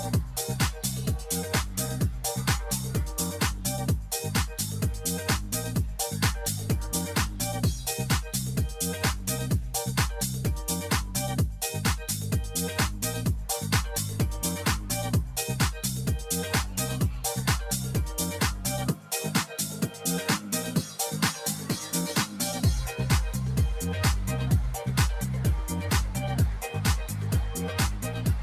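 From 18.95 to 19.11 s the sound briefly sinks in level, dipping by about 7 dB at its deepest before recovering, a short quieter patch of roughly a sixth of a second. This is sound cut by the noise suppressor: the suppression stage misjudged this stretch of the signal as noise and applied extra attenuation to it, pulling it down more than the surrounding audio and leaving a momentary gap in loudness.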